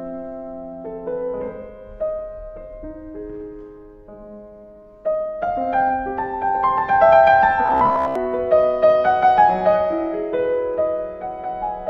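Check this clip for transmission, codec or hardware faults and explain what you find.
One fault is audible: robotic sound from repeated short buffers between 7.66 and 8.16 s. The sound becomes a rigid metallic buzz at about 66.7 Hz, a pitch set by a 15 ms fragment repeating while most of the real audio is skipped, likely because new audio arrived too slowly.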